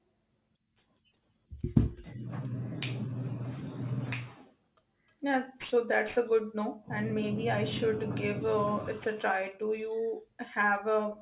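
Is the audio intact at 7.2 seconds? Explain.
No. Aliasing runs through the whole clip, including 7.2 s. Downsampling without an anti-alias filter, which fits a drop from 48 kHz to 8 kHz, folds energy above 4 kHz back down as gritty, metallic sibilants roughly 25 dB under the speech. A clean band-limit would sound muffled rather than harsh.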